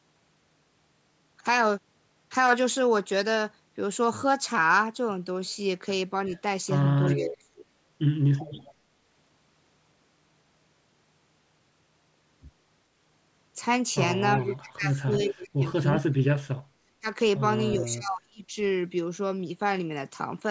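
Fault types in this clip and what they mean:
Echo leak: A delayed copy of the voice trails the speech in short scraps, lagging by 370 ms, at 6.26, 7.15, 8.39 and 14.42 s. The copy sits well below the main voice, from about 30 dB down in the first scrap to about 10 dB down at 7.15 s. This is likely a far-end loudspeaker feeding its microphone while that side's echo canceller let part of the signal back through.
Speech suppressed in double talk: The voice dips sharply in patches, most heavily from 14.39 to 16.55 s, where it drops by around 35 dB. Shorter dips come at 7.11 to 7.64 s, briefly at 17.01 s, and from 17.75 to 18.56 s. The likely cause is an echo canceller that could not tell the talker from loudspeaker echo while both sides spoke at once, so it turned both down.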